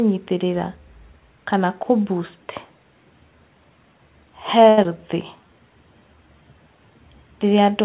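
At 4.69 s there's a short stall from a late packet. The buffer ran dry, so the last sound gets held for 83 ms, a slightly buzzy drag, though nothing's lost.

Right after, from 4.83 to 4.85 s, there's a short concealed packet loss. About 40 ms never arrived and got papered over with a quick smear as the delay dropped back by roughly 30 ms.

Then from 5.36 to 5.54 s the jitter buffer slows down, repeating pitch periods to add 41 ms. That stretch plays at 82% speed, drawn out but at the same pitch.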